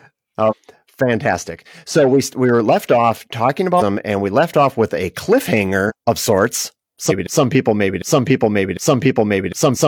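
Compressed frames skipped shows up at 0.47, 3.77 (between "were left off talking" and "and we left off"), 5.86 (just before "of sorts"), 7.06 (right after "of sorts") and 9.71 s. Each time the audio jumps ahead, with roughly half a second missing (closer to 0.4 s at 5.86), which points to about ten frames of around 46 ms dropped from the file or rejected by the decoder.

From 7.27 s to the end there's a broken-record loop: a 0.75 s fragment plays four times back to back, likely because the player, encoder or stream stalled and kept resending its last chunk. Whatever should have played there is gone.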